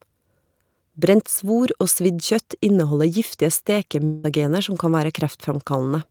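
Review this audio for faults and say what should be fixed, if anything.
From 4.05 to 4.26 s, the speech gives way to a smeared buzz that continues the last sound and fades. When speech resumes, about 180 ms of it has been skipped. This is a long network dropout, likely caused by a run of packets that never reached the receiver. The receiver's concealment stretched the final fragment across about 182 ms rather than leaving a silent gap, then picked up further along the stream without the lost part.

Forward error correction or redundant packets, a deeper jitter buffer and a more stable network link would keep a stretch this long from being lost.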